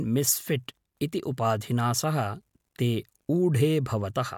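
Speech, and nothing is technically wrong with it, so there are no times or causes to give.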